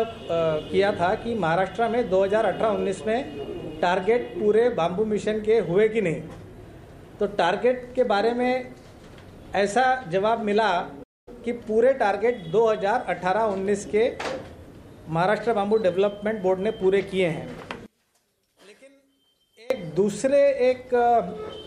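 At 11.03 s the sound stops dead for about 234 ms and resumes at 11.28 s. This is a playback stall, likely the player running short of data or its thread being blocked. On the waveform it shows as a flat gap, and on the spectrogram as a blank vertical band.

From 17.86 s to 19.70 s the level drops by about 29 dB, leaving only a faint residue. This points to one channel inverted, likely so that the shared content cancels when summed to mono. The waveform shrinks sharply and the spectrogram fades.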